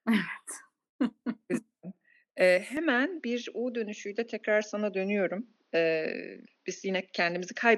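Speech that abruptly turns duller and more boxed-in at 2.77 s and stays that way to the end, with no gap at the change. From that point nothing is left above 6.6 kHz, the level shifts by around 5 dB, and a faint new background noise sits far below the voice. This is likely an input switched to a poorer device, with the recording jumping mid-take to a narrower-band microphone carrying its own tone, gain and noise floor.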